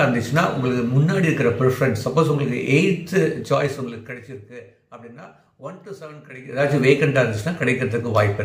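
Zipper noise runs from 3.37 to 4.57 s, as the audio falls by roughly 20 dB in 2 dB steps at about ten a second, and again from 6.36 to 6.74 s, as it climbs back by roughly 20 dB at about thirty steps a second. The level was moved in coarse unsmoothed increments, so each jump leaves a small click, heard as a ticking that speeds up in the second, faster ramp.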